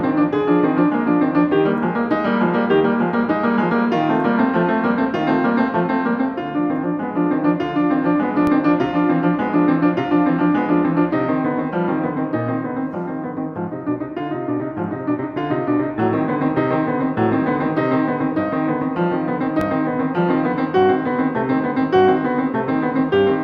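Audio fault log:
8.47 s and 19.61 s, DC step: each is a single low thump, with the music continuing unchanged. The waveform's zero line jumps suddenly to a new offset, then drains away over a fraction of a second, which fits a high-pass filter near 2 Hz pulling it back.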